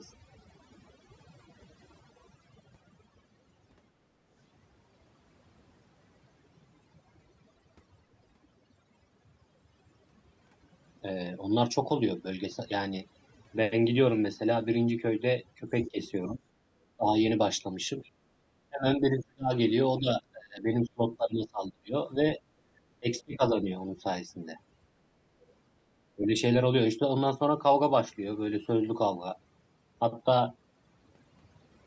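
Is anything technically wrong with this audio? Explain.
Yes. Three kinds of fault are audible in this speech recording.

Overdone noise removal runs through the whole clip. The noise reducer was set too aggressively, so it pulls individual frequency bands down whenever they sit near its noise estimate, and it takes the quieter parts of the voice with them. The pauses collapse to near silence flecked with twinkling specks. Its band is limited to 8 kHz by the call's microphone processing.

Other side's voice leaking through appears in two brief scraps, from 15.81 to 15.88 s and from 18.03 to 18.10 s. Each is very faint, around 30 to 35 dB below the talker. The likely cause is an echo canceller that left residue of the far-end loudspeaker signal in the microphone feed. The result is a short fragment of a second voice.

Speech suppressed in double talk occurs at 15.88–16.44 s, 16.97–17.13 s, 18.69–19.51 s, 20.00–21.94 s, 23.00–23.70 s and 26.15–26.31 s. 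The talker's level dips by roughly 15 to 30 dB, with the longest stretch of damage, about a second and a half, in the 20.00–21.94 s span. This is likely the echo canceller failing to separate near-end speech from loudspeaker echo while both sides talk at once, and turning both down. The voice sags and breaks up in pieces.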